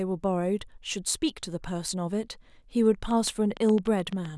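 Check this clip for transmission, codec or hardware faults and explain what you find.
One hardware-type fault turns up near the end of the speech. From 3.11 to 4.26 s there is a train of clicks: roughly ten sharp, similar ticks at about 7 per second, unevenly spaced and peaking around 5 dB above the speech. This is likely interference from nearby equipment or a faulty connection or power supply.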